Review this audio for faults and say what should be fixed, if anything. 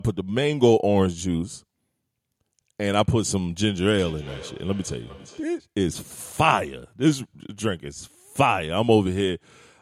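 Two devices in one room were on the same call, and one played back what the other's microphone sent. That microphone picked the sound up again, and its echo canceller did not remove it, because each canceller only handles its own device's playback. This feedback echo between two devices brings the speech back at intervals of roughly 0.4 s from 3.88 to 5.63 s, at about 19 dB below the speech at its loudest. To prevent it, keep only one device in the room connected to the call, or mute the speaker and microphone on the others.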